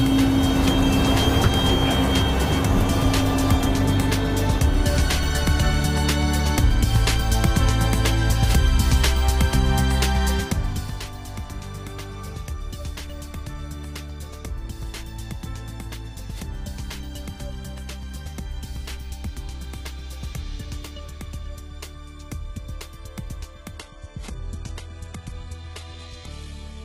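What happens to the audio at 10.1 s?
At 10.1 s the audio is intact, with no fault and no sudden or fader-like change in level.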